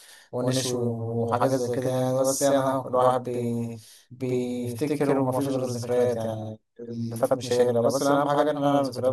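From start to finish the speech carries a channel delay (doubling): one side of the stereo pair arrives about 85 ms late, which fits a 4096-sample buffer, and the two sides are folded to mono. Every syllable is followed by a second copy at equal strength, a distinct slap rather than a smeared tone. Room reverberation would decay and trail off, and a delay of only a few milliseconds would give hollow comb filtering instead.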